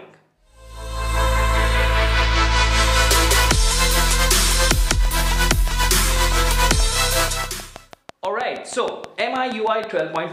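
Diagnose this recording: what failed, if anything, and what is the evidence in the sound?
A steady ticking rides over the sound from 5.05 s to 10.17 s: about thirty near-identical clicks at a regular 6.3 per second, peaking roughly 10 dB above the programme. This train of clicks most likely comes from interference coupling into the analogue wiring.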